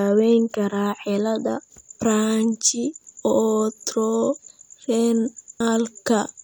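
A recording of speech, with no technical fault to be heard anywhere in it. Nothing in it calls for a time or a cause.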